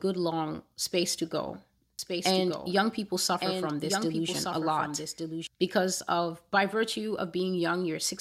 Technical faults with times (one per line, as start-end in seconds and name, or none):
1.99-5.47 doubled audio track